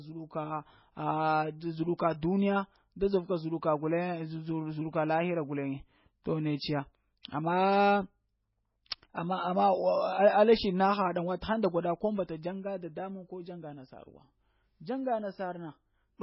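From start to finish the speech has nothing above about 5.5 kHz, and its remaining content sounds watery and swirly, with chirping on s sounds and smeared attacks. The damage is heavy and likely comes from MP3 compression at a very low bitrate, around 16 kbps. At that rate the encoder cuts the treble and switches weak frequency lines on and off from frame to frame.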